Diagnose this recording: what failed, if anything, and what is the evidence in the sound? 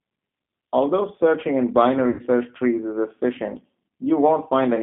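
The codec stage is at fault for the whole clip. The speech sits in a narrow line band, from about 200 Hz to 3.5 kHz, with nothing above it. The damage is plainly audible: a rough, slightly synthetic edge on every phrase. This is the G.729 codec, and the sound fits its 8 kbit/s G.729A form. It rebuilds speech from a vocal tract filter, a pitch predictor and a few pulses per frame, so fine detail is lost.

The network stage failed from 2.10 s to 2.22 s. About 90 ms of speech is missing, which fits three lost packets. This is VoIP packet loss concealed by the speech codec. The decoder filled the gap by repeating its last pitch and filter settings while lowering the gain. The speech there is stretched into a fading buzzy tone or coloured noise. Because each frame builds on the one before, the speech stays weak just after the gap until the decoder recovers.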